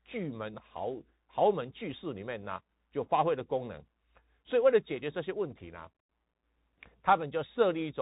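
Speech clip carrying the Bluetooth CVSD headset codec throughout: nothing passes above 3.8 kHz, s sounds come out scratchy and a granular hiss sits under the speech. The one-bit up-down coding, whose adaptive step lags loud high-frequency sound, fits a 64 kbps narrowband headset link.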